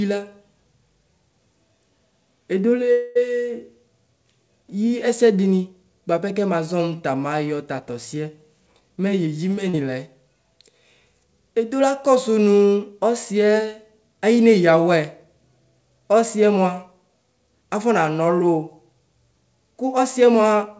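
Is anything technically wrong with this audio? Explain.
Yes, there are four separate faults in this speech recording, heard over a call path whose G.722 coding leaves nothing above 8 kHz.

From 2.92 to 3.17 s there is a call audio freeze. The last sound is held and stretched into a fading buzz for about 235 ms, and then the speech resumes exactly where it left off. Nothing is lost, but the rest of the audio is pushed later. The likely cause is delayed packets draining the jitter buffer, so the receiver had to improvise. On a spectrogram it shows as smeared, repeated harmonics that fade in level. The waveform shows a decaying periodic stretch instead of a silent gap.

Between 8.53 and 9.28 s a jitter buffer speed-up makes the speech sound hurried. It runs at about 114% speed with no change in pitch. The buffer had built up extra delay, so the receiver cut out many short pitch-period slices, around a tenth of a second in total. 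On a spectrogram, syllables and formant movements look compressed in time while the harmonic spacing stays the same. The waveform shows cycles joined with slightly uneven spacing.

At 9.69 to 9.75 s, shortly after the speed-up, there is a short concealed packet loss. About 40 ms of audio never reached the decoder in time. The receiver filled roughly 38 ms of it by extending the preceding sound and then blending back into the real signal, which is heard as a brief smear or wobble. On a spectrogram this looks like a short patch of frozen, slightly blurred harmonics or noise. The waveform shows a repetitive stretch with a soft crossfade at its end.

At 15.04 s a bit error spike produces a single sharp tick that has nothing to do with the speech. A flipped bit pushed three consecutive samples off their true values by a power of two before they snapped back. On the waveform it is a narrow vertical spike. 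On a spectrogram it appears as a thin broadband line running up through every frequency.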